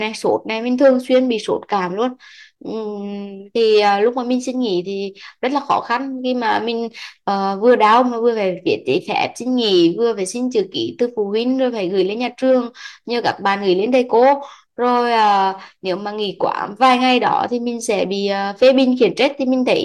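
No technical faults are audible anywhere in the recording.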